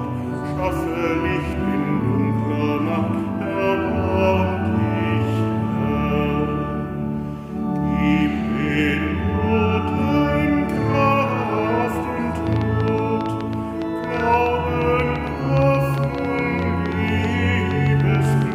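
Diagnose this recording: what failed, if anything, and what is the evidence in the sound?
A train of clicks runs from 12.47 s to 18.53 s, about 7.3 per second at irregular spacing, around fifty pulses of similar shape peaking about 5 dB above the signal. The stage is likely analogue wiring picking up interference from nearby equipment, which injects repeated impulses into the signal.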